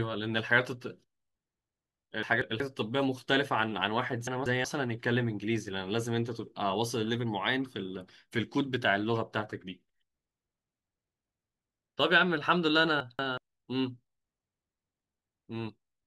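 At 2.23 to 2.60 s, 4.27 to 4.64 s and 13.00 to 13.38 s, chunks play out of order: a 186 ms block of speech arrives one chunk late and follows its successor. Nothing is missing, but each swap sounds jumbled, with three hard joins.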